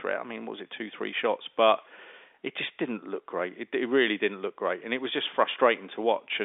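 No technical faults can be heard in this speech, which comes through the narrow band of an ordinary telephone line.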